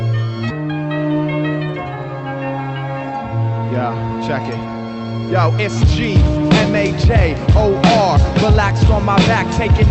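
No faults can be heard anywhere in the audio.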